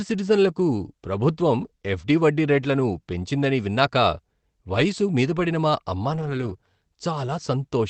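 At 1.61 to 1.67 s and 4.73 to 4.79 s, then 6.09 to 6.51 s, lost packets were rebuilt from error correction: low-bitrate redundant copies fill roughly 40, 40 and 220 ms, sounding rougher and noisier. Short concealed packet loss follows at 6.53 to 6.57 s, where the decoder extrapolates the preceding sound, leaving a brief smear.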